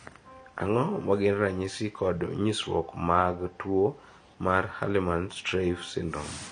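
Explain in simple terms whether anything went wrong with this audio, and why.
The speech was likely squeezed with AAC compression, which throws detail away: nothing is left above 9.5 kHz, so it sounds dull and smeared throughout.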